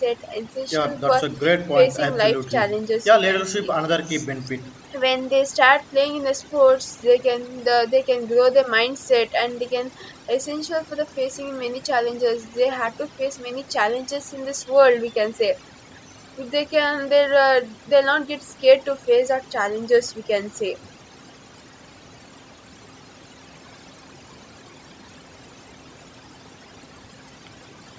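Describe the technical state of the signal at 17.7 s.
At 17.7 s the signal carries overdone noise removal, present across the whole clip rather than just this moment. The noise suppressor is working far too aggressively, pushing individual frequency bands down or shutting them off whenever their level sits near its noise estimate, and quieter parts of the speech get cut along with the noise. The result is a lowered background broken up into twinkling specks. The call microphone processing shows up as a top end that stops around 8 kHz and a trimmed lowest bass.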